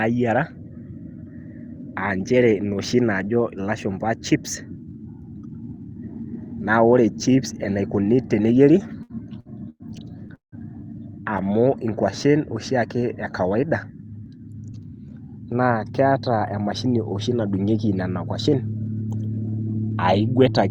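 From 8.83 to 9.83 s the speech suffers repeated stalls (stutter): the flow halts four times, with the last sound held and stretched across each gap. Packets were arriving late or too slowly, so the jitter buffer kept running dry and the receiver bridged about 246 ms in all, the longest hold 104 ms, roughly a quarter of that second. Nothing is lost. Unlike a single freeze, the delivery catches and drags in several short jolts.

At 10.35 to 10.55 s comes a call audio freeze. The sound is carried on for 174 ms and then drops to silence for about 140 ms of that, before resuming exactly where it stopped, with nothing skipped. The likely cause is packets held up in transit, leaving the jitter buffer empty and adding 174 ms of delay. This is one continuous hang that fades out, where the stutter before it was a cluster of brief catches.

From 11.23 to 12.32 s a jitter buffer slow-down draws the speech out to 93% of its normal rate. 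Repeated pitch periods and stretched pauses add 81 ms so that the buffer can rebuild its reserve. The pitch stays the same and the gaps are filled smoothly, so the speech sounds leisurely and elongated rather than interrupted. That smoothness separates it from the stalls, which halt the flow outright.

From 14.20 to 14.90 s a jitter buffer speed-up has the opposite effect, pushing the speech to 116% of its normal rate. The buffer held more audio than its target, so the receiver trimmed short pitch-period slices, around 150 ms in total, to cut the delay. The pitch does not rise as it would if the audio were simply played back faster. Instead the speech sounds hurried, with syllables packed closer together.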